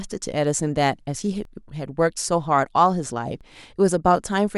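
At 1.45 s and 3.41 s, speech skips about 40 ms, likely audio missing between 2 s chunks; the waveform shows abrupt splices without silence.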